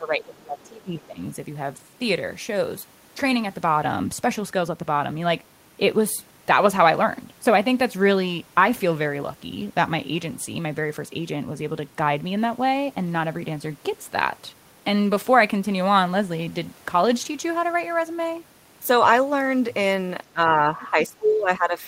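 Speech suppressed in double talk affects this speech clip from 0.0 to 1.24 s and again from 20.33 to 21.8 s. In each stretch, about a second of the talker's voice is pulled down, by roughly 20 dB at the deepest point in the first and around 15 dB in the second. The likely cause is an echo canceller that could not tell the local talker apart from loudspeaker echo while both were active, so it attenuated everything together. The other side's voice leaking through appears inside the second dip, from 20.82 to 20.87 s, as a brief scrap sitting roughly 25 dB below the speech. It is likely far-end sound from the loudspeaker that the echo canceller failed to remove completely from the microphone signal.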